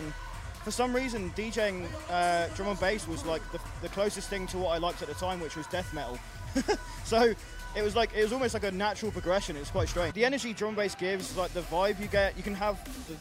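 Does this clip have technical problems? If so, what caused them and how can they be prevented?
Yes. At 10.1 s the sound jumps abruptly ahead with a small blip, and a stretch of the programme is gone. This is likely a stream segment skipped: one chunk failed to load, so the player moved on to the next. Prevent it with larger playback buffers and segment retries.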